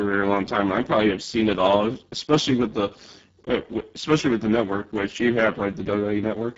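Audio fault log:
Throughout: Speex codec. The speech has the grainy, hoarse quality of heavy Speex damage, which points to a very low bitrate setting somewhere around 6 kbps. At that setting the CELP coder has so few bits for the excitation that it can't rebuild the fine structure, so you get buzz and noisiness in place of detail. Nothing comes through above 7.7 kHz, and the top band that remains is just shaped, noise-like fill.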